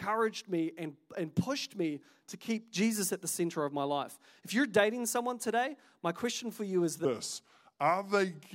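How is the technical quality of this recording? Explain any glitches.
The recording has one glitch, a section at the wrong speed at its very end. From 7.05 s to the close at 8.55 s, the speech plays at about 0.82 times its proper rate, likely because that stretch was fitted to the wrong clock during editing or playback. Speed and pitch drop together, so the voice suddenly turns slower and deeper, roughly four semitones lower. On a spectrogram the harmonics and formants shift abruptly downward at 7.05 s, and in the waveform the syllables and pitch periods visibly stretch out.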